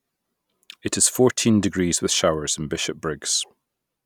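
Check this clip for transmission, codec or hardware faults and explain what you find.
Nothing to flag here; the speech comes through steady and intact, with no sign of trouble from the transmission path, the codec or the hardware.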